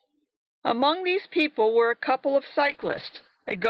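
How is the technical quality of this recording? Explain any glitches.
The speech runs through a WebRTC call path using the Opus codec at 40 kbps, and one glitch appears near the end. From 2.69 s to the end, a call bitrate drop pushes the encoder from 40 to 9 kbps and narrows its bandwidth to 8 kHz, so the speech turns coarser and muffled.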